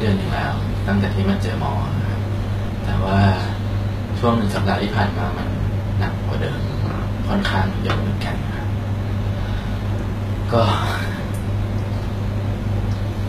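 Speech, carrying likely HE-AAC compression at a bitrate that points to about 20 kbps. Copied lower bands stand in for the real treble, so s sounds turn gritty and metallic, with nothing above 14.9 kHz.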